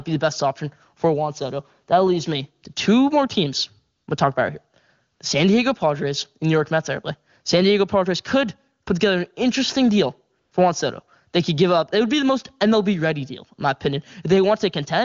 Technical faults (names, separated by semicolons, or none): AMR comfort noise